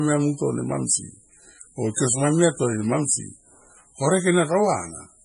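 Throughout the speech, the sound is watery and swirly, with metallic chirps on s sounds and nothing above 10.5 kHz. This is likely heavy MP3 compression at a very low bitrate, around 24 kbps, where weak frequency lines flicker between frames and the treble is cut off.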